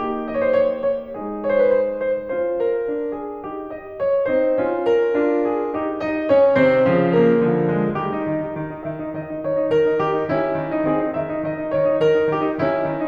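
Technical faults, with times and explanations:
No technical faults are present in this music signal, which holds steady with no breaks, glitches or interruptions from beginning to end.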